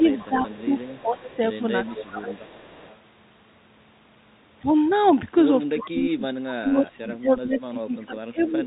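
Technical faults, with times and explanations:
0.00–0.08 s, 0.28–1.40 s, 1.84–2.45 s and 5.72–8.63 s, speech suppressed in double talk: the level dips by about 5, 10 and 15 dB, then by up to about 25 dB over the last stretch. This is likely an echo canceller mistaking overlapping talk for echo and attenuating both.
0.00–1.37 s, 1.86–2.14 s, 2.32–2.96 s and 8.39 s to the end, echo leak: a faint copy of the speech trails 348 ms behind, about 20 to 30 dB down. This is likely loudspeaker pickup at the far end that its canceller failed to fully remove.
0.42 s, packet loss with pitch repetition: a 20 ms gap, consistent with one lost packet, is bridged by repeating the last pitch cycle. It registers as a brief held, slightly buzzy tone before the speech resumes.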